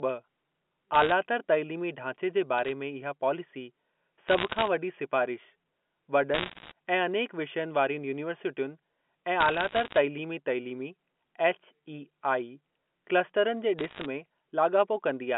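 Bit errors on a digital phone line corrupt individual samples in this speech clip, at roughly 0.4 to 1.5 bits in a hundred, producing bursts of sharp ticks and crackle over the speech at 0.94–1.12, 2.58–2.72, 4.28–4.68, 6.34–6.72, 9.40–9.98 and 13.79–14.06 s, within a narrow telephone band.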